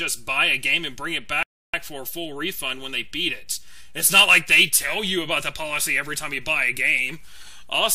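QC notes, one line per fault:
1.43–1.74 s, rebuffering stall: playback halts for about 0.31 s and then picks up at exactly the point where it stopped, with nothing skipped. The player has used up its downloaded audio and waits for more to arrive, so the clip gains roughly 307 ms of dead air. On the waveform, the signal drops abruptly to near-silence and restarts with a hard edge. On the spectrogram, a clean vertical gap of that width cuts across all frequencies.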